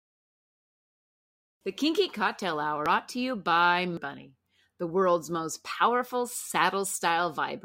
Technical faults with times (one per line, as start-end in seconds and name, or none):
2.86 compressed frames skipped
3.97 compressed frames skipped